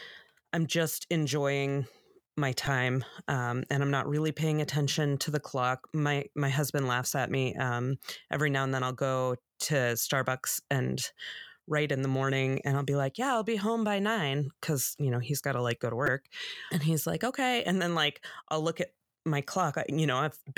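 At 2.66 s and 16.07 s, a repeated buffer: late audio made one 2.9 ms chunk (fitting a 128-sample buffer) replay four extra times. This produces a brief buzz, seen as identical waveform cycles and a thin vertical stripe.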